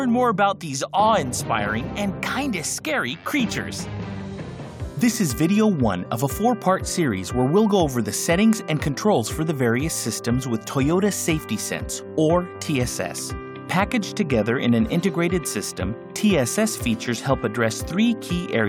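No technical faults are audible.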